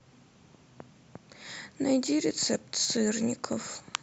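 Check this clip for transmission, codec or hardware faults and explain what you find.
One hardware fault runs through nearly the whole recording. From 0.15 s to 3.98 s the speech carries clock slip clicks: faint, evenly spaced ticks about every tenth of a second, around forty in all, clearest on the louder stretches. The likely cause is two devices running on unsynchronised clocks, roughly 200 ppm apart, so a single sample is dropped or repeated each time the drift adds up to one full sample.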